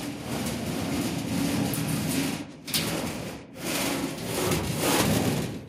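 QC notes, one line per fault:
No faults heard in this recording.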